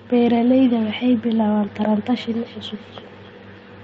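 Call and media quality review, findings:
Feedback echo between two devices, 1.83 s to end: second device in the room replaying far-end audio into the mic; each echo canceller only removes its own playback. Speech returns roughly every 300 ms, thinner and ringing, peaking about 27 dB below speech. Band limited near 8 kHz, consistent with the wideband Opus path.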